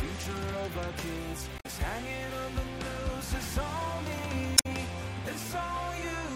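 From 1.56 to 1.66 s, and again from 4.54 to 4.66 s, there is damaged data in the compressed stream. Corrupted bytes make the decoder misread frames and lose sync until it finds a valid header. Each event is a brief glitch of roughly a tenth of a second.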